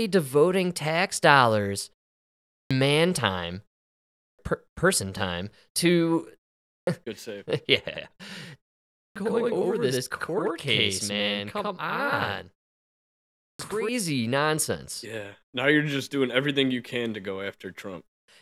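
At 2.45, 4.09 (between "man time" and "person time to"), 6.61 (just after "person time to"), 8.9 and 13.33 s, speech bursts in abruptly with its opening sounds missing: a clipped start after a pause. After gaps of 0.31 to 0.86 s, the output device dozes off and needs about 0.26 to 0.30 s to wake, swallowing that much sound each time.

From 7.89 to 13.89 s, starting right after "good save", every syllable is trailed by an equal-level copy 92.88 ms later, heard as doubling or a slap echo. This is a channel delay: one channel runs late, which fits a 4096-sample buffer, and both are summed to mono.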